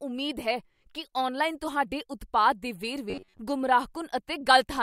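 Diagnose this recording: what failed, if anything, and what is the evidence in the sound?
The driver or buffer stage likely ran dry from 3.10 to 3.40 s, replaying blocks of about 10.7 ms instead of fresh audio for most of that span. The result is robotic sound from repeated short buffers: the speech turns into a rigid metallic buzz fixed at 93.8 Hz.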